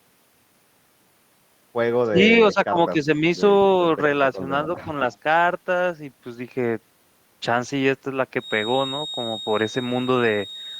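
Speech in which the talker's level collapses at 2.03–2.18 s by about 30 dB, then sags by about 15 dB across 2.53–3.24 s and slightly at 4.84–4.88 s. This is speech suppressed in double talk, likely an echo canceller ducking its own talker along with the loudspeaker echo. At 4.78–4.84 s, just before that last dip, a faint echo leak occurs, a copy arriving 239 ms late at about 25 dB down, likely residual loudspeaker pickup; its delay separates it from reverberation. From 8.34 s to the end a steady, slightly wavering 3.7 kHz tone sits about 15 dB under the sound, a feedback whistle likely from a loop held just short of runaway howl.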